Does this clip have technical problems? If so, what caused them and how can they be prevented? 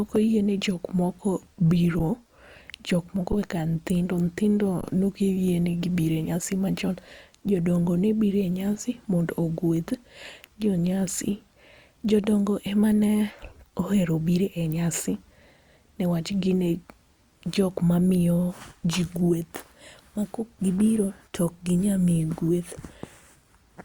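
Yes. Underrun with held sample at 1.99 s, 3.32 s after "jok moko", and 4.81–4.83 s before "ne ok": the output buffer empties, the signal freezes flat, then resumes softly without lost speech. Larger playback buffers or higher audio-thread priority prevent it.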